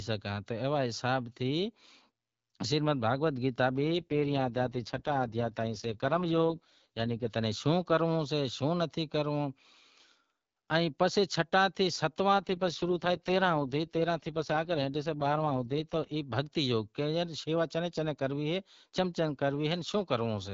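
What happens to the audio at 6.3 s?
An AMR rate drop runs from 3.81 to 7.29 s, after "شریمد بھگوت گیتا" until "تنیں شوں کرنڑو سے". A weak link pushes the codec to spend bits on error protection, and the rough, synthetic speech at the same bandwidth fits a fall from 12.65 to 6.6 kbit/s.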